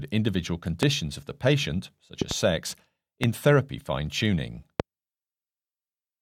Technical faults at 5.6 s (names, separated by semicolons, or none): none